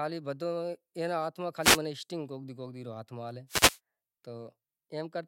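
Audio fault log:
1.61–1.79 s and 3.48–3.79 s, wireless microphone noise hit: two brief bursts of static swish over the speech as the FM radio link fades through reflection cancellation and receiver noise surges. On a spectrogram these appear as broadband vertical smears; the waveform shows a dense noisy envelope.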